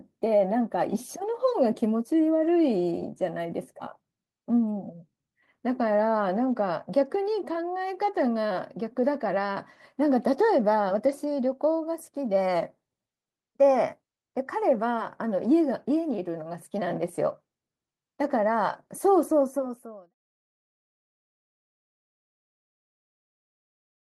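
Nothing here counts as a fault, since the speech just runs along and then eases out in a gentle, editor-style fade that begins around 19.5 s and is done by 20.15 s.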